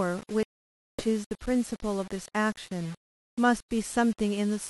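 Throughout, the speech carries a grainy, gritty distortion about 20 dB below it that tracks the sound. The likely cause is low bit depth without dither, consistent with rounding to 6 bits.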